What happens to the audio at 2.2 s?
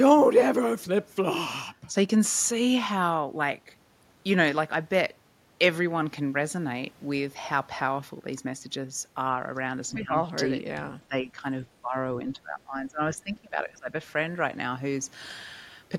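Nothing goes wrong at 2.2 s; the speech runs through that moment intact, with no dropout, click or distortion.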